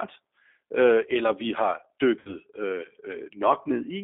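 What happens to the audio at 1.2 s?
At 1.2 s the speech carries G.729 codec damage, present across the whole clip. Pulse-coded resynthesis confined to about 250 Hz–3.5 kHz sounds rough, thin and synthetic, fitting an 8 kbit/s codec.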